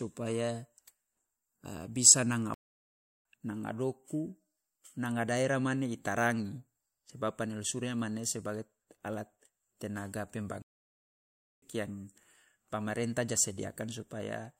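Playback stalls at 2.54 s and 10.62 s cut the speech to silence for 0.71 s and about 1.0 s, likely because the player's buffer ran dry before resuming.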